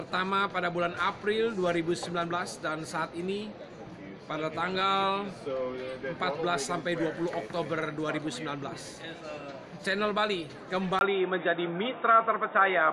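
At 10.99 s the sound drops out for about 20 ms and then returns duller and boxier, with nothing above 3.8 kHz, a shift of a few decibels in level, and a faint new background hiss. This is most likely an input switched to a poorer device. On a spectrogram the upper band ends abruptly at the switch, leaving a flat ceiling near 3.8 kHz until the end. The waveform shows a brief gap and a step in amplitude.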